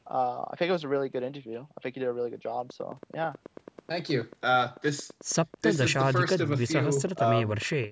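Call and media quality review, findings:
Train of clicks, 2.7 s to 7.85 s. Regular ticking at about 9.2 per second, roughly fifty in all, peaking about 5 dB above the speech. Audible through pauses. Much the same pulse shape each time. Likely electrical interference or a struggling interface injecting periodic spikes. Call microphone path band-limited below 8 kHz.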